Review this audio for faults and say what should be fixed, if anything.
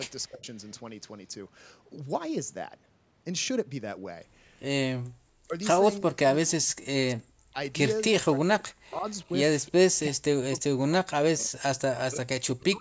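Speech suppressed in double talk: the speech dips by up to about 40 dB at 0.27–0.46 s, 5.48–7.58 s, 8.13–9.08 s and 9.94 s to the end, likely an echo canceller ducking the local talker while the far end speaks.

Background gated by the echo canceller: at 5.09–5.2 s the room sound drops by about 39 dB during loudspeaker playback, then returns once the canceller releases.

Echo leak: at 5.97–6.51 s and 9.09–9.72 s a faint copy of the speech returns 337 ms late, about 30 dB down, likely loudspeaker pickup the canceller failed to remove.

To prevent these, improve the echo canceller's double-talk detection and residual echo suppression, and have far-end participants use headsets rather than open loudspeakers.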